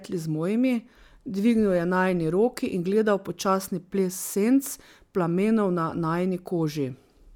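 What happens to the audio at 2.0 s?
Nothing goes wrong at 2.0 s; the speech runs on intact through that moment with no dropout, click or other fault.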